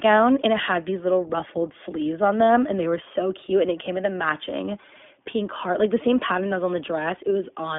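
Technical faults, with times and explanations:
Throughout, iLBC codec: the speech is limited to a narrowband telephone range of roughly 200 Hz to 3.5 kHz, with nothing above 3.7 kHz. The coding damage is plainly audible as a slightly rough, synthetic texture. Each short frame's excitation is coded independently rather than predicted from the previous one, and the result fits iLBC's 20 ms mode at 15.2 kbps.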